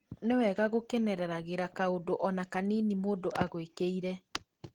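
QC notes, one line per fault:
throughout: Opus voice compression. The speech sounds hoarse and slightly robotic, with plainly audible coding damage, although content still reaches 20.1 kHz. Hybrid linear-prediction and transform coding at what fits about 16 kbps quantises the excitation coarsely in 20 ms frames.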